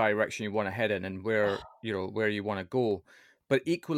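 A speech recording with a single sharp click at 2.91 s, most likely caused by dropped samples: a couple of samples appear to be missing, so the waveform leaps straight from one value to a later one with nothing in between. The gap lasts only a tiny fraction of a millisecond, far too short to remove any of the speech, so only the click is heard. A spectrogram shows a thin vertical line at that instant, and the waveform shows an abrupt step.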